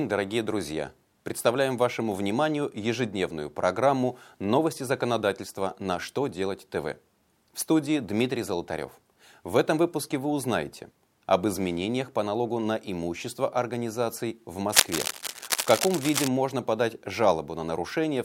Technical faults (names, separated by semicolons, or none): cable scratch noise